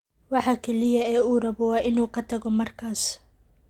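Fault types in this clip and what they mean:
Lost packet rebuilt from error correction: at 0.83–0.85 s, and at 1.83–1.85 s between "rabo waa" and "inuu ka tago", 20 ms came from a low-bitrate backup copy, sounding briefly rougher and noisier. Spectrograms show a narrow grainy column; the waveform has no gap.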